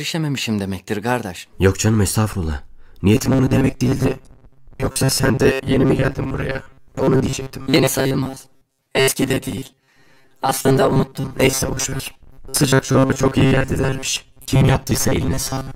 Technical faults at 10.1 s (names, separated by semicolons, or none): robotic sound from repeated short buffers